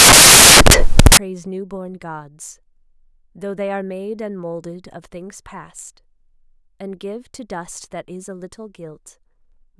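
Speech clip opening with samples built from the wrong bytes from 0.00 to 1.17 s: misassembled sample bytes push the low bits into the high positions, producing loud white noise.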